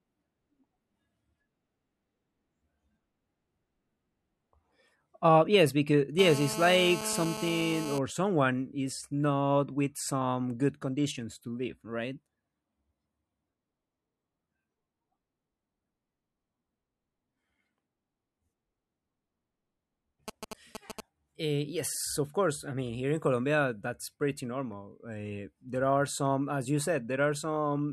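From 6.19 to 7.99 s, just before "someone is not with", a GSM phone buzz sits about 9 dB below the speech: a steady, raspy 217 Hz drone of rectified call bursts, continuous rather than pulsed. From 20.28 to 21.00 s come GSM signalling bursts, roughly 10 dB down, a galloping dit-dit-dit of short 217 Hz buzzes instead of an unbroken tone.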